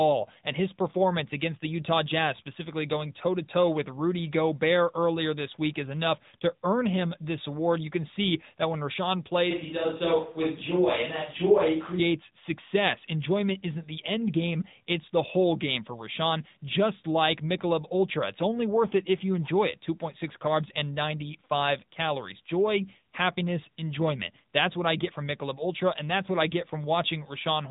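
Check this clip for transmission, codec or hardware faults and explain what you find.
One fault runs through the whole speech clip: AMR narrowband mobile codec damage, plainly audible from start to finish. The voice sounds thin and boxy, with nothing above 3.8 kHz, and carries a buzzy, synthetic edge. The codec samples at 8 kHz and rebuilds each 20 ms frame from a vocal-tract model excited by a few pulses per 5 ms subframe, discarding high frequencies and fine detail. The degree of buzziness points to an upper AMR-NB mode, around 10 kbps.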